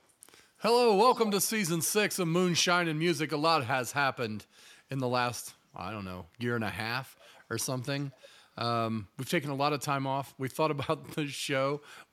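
Echo leak at 0.08–0.13 s, 1.12–1.5 s, 7.2–7.41 s and 8.01–8.28 s: a delayed copy of the speech trails it by about a third of a second (323 to 335 ms). This is likely a far-end loudspeaker whose echo canceller let part of its microphone pickup return down the line. The first and third scraps are barely audible. The second, about 10 dB below the speech, is plainly heard, and the fourth is faint but noticeable.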